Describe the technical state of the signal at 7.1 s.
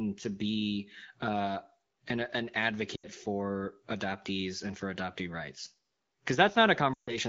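At 7.1 s the signal sits inside a run of lost AMR speech frames, from 6.93 to 7.16 s. Frames failed their error check, so the wideband decoder repeated the last good pitch and vocal-tract settings at falling gain. The sound drops to near silence within two frames.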